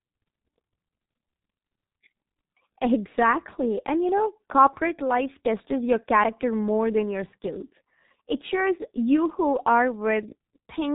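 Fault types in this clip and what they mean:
G.723.1 codec: a low-rate telephony coder squeezing this speech to about 6 kbit/s in 30 ms frames, with nothing above 3.8 kHz. The damage is heavy, leaving it muffled and hoarse with smeared consonants, unlike plain band-limiting, which dulls without the rough, slowly updated voice model.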